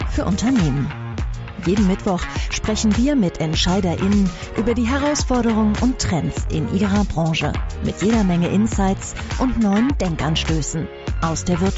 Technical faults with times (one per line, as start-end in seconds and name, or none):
none